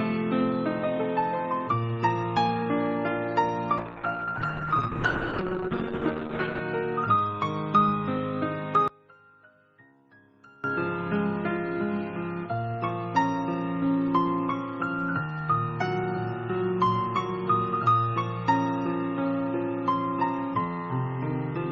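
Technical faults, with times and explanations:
3.78–6.67 s, call bitrate drop: the encoder falls from 32 to 8 kbps and sits at that floor for about 2.8 s, so the sound turns coarse and watery while the top band narrows from 12 kHz to 8 kHz. Unlike a simple filter, grainy coding texture accompanies the muffling, and both recover together.
8.88–10.64 s, one channel inverted: the level suddenly sinks by about 26 dB, leaving a faint residue rather than silence. This is likely one channel with reversed polarity cancelling the shared content when summed to mono, which sets it apart from a dropout or a mute.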